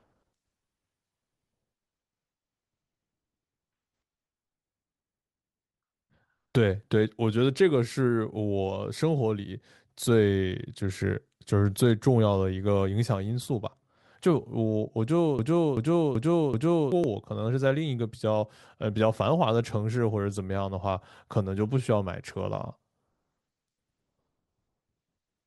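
A broken-record loop runs from 15.39 to 16.92 s. A fragment of about 0.38 s plays four times in a row, each repeat identical and butted straight against the last. The likely cause is a stall in the player, encoder or stream, which kept resending the last piece of audio it held instead of moving on. Whatever should have been heard during those 1.5 s never arrives. The result is a stuck, stuttering repetition before the sound resumes.

An overlap between stream segments shows up at 17.04 s and again at 21.03 s. Each is a brief click or tiny skip, and the two are about 4 s apart, which fits 4-second stream segments. The time stamps of adjacent segments overlapped. The player then trimmed that overlap from audio that had not actually been duplicated, so a few milliseconds of real sound were discarded and the waveform jumps abruptly at each boundary.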